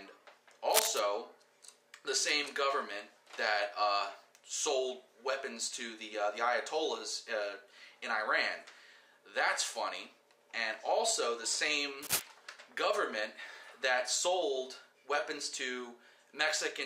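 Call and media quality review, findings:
Cable scratch noise, 0.70 to 1.00 s and again 12.02 to 12.22 s. Dense, ragged scratchy bursts riding over the sound, roughly as loud as the programme itself. Likely a worn cable, connector or pot being moved. Contact resistance jumping around fast, injecting irregular noise for a few hundred ms each time. Worth a wiggle test on the leads and the jack.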